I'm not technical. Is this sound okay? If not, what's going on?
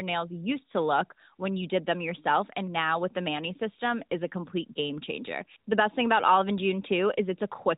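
Yes, it's fine: it's speech with the narrow sound you'd expect from an ordinary mobile phone call, and there's nothing going wrong with it.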